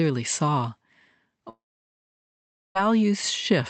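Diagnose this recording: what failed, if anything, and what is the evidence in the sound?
From 1.49 to 2.77 s the speech breaks into a fading buzz, then about 1.2 s of silence, and resumes with audio lost: likely a long network dropout.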